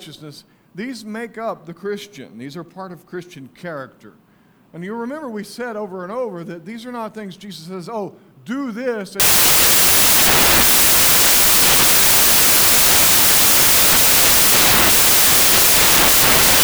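From 9.20 s to the end, the sound turns into loud, harsh broadband noise. These are samples built from the wrong bytes: the reader misassembles each sample, so rapidly changing low-order bits land in the high-order positions.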